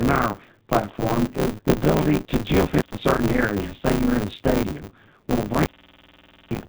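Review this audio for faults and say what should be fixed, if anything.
G.729 codec damage is present throughout. The speech is rebuilt from a vocal tract model and sparse pitch pulses, consistent with an 8 kbit/s coder, so it sounds rough and synthetic with nothing above 4 kHz.

Buffer tearing runs across the whole clip as a 100 Hz robotic buzz during sound. Roughly two-fifths of each period repeats audio about 20 ms old, with hard joins on both sides.

Intermittent contact cuts the sound twice. The first is at 2.72 to 3.00 s, just after "is the ability to", with about 0.12 s open and crackle at both edges. The second is at 5.46 to 6.65 s, with about 0.87 s open.

To fix these, use a wideband codec instead of G.729, resynchronise the audio writer with the hardware read pointer, and reseat or replace the loose cable or plug.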